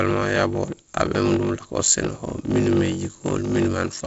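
Throughout the speech, a block size mismatch (padded) leaves a zero-filled gap in every block. This causes a 46.9 Hz buzz, which fits a 1024-sample block, and slows speech to 0.861 speed with its timbre unchanged.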